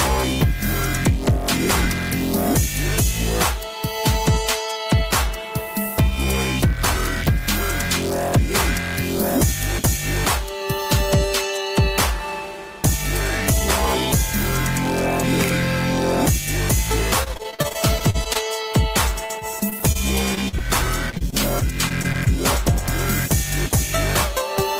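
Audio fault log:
17.23–22.28 s, repeated packet loss (robotic sound): dozens of brief dropouts, the longest about 41 ms, arrive in quick succession, and about 14% of this stretch is patched by stretching the preceding sound forward. Where patching runs out, sound is simply missing, giving a choppy, robotic texture. On a spectrogram, short vertical seams show smeared, repeated harmonics and occasional blank slivers; the waveform shows copied cycles and abrupt notches.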